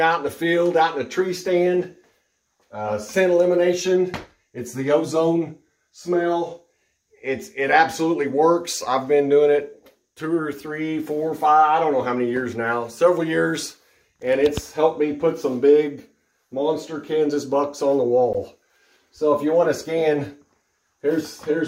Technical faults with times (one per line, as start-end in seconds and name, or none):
18.33 block of digital silence